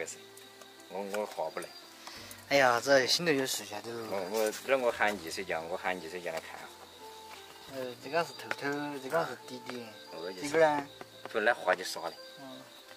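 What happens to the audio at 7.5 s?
Nothing goes wrong at 7.5 s; the audio runs through that moment intact, with no dropout, click or glitch.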